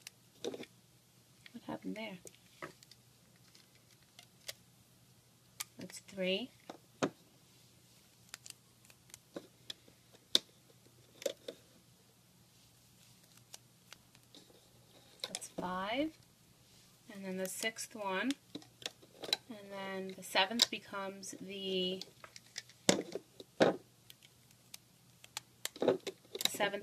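From 13.92 s to 17.18 s the audio carries a filter restarted on every block: the filter loses its stored state at each block boundary and begins again from zero, so every block opens with a brief transient. These arrive 50 times a second, one every 20 ms, and fuse into a 50 Hz buzz that rises and falls with the signal's loudness. A waveform shows evenly spaced small spikes; a spectrogram shows vertical lines at 20 ms intervals and a 50 Hz harmonic comb.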